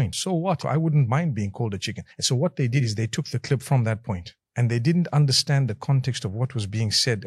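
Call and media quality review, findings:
Nothing stood out on listening to this clip.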